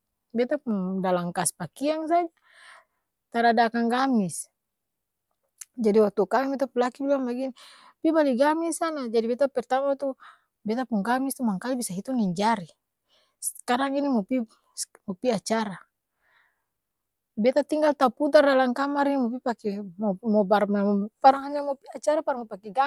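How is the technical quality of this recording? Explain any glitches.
No glitches or technical faults can be heard anywhere here.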